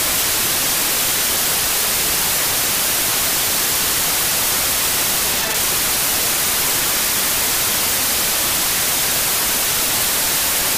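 Wrong sample width runs throughout this recording of sounds: 16-bit samples are being read as packed 24-bit values, so most values straddle mismatched bytes. The result is loud, harsh noise with the original sounds buried inside, playing about 1.5 times fast and correspondingly higher in pitch.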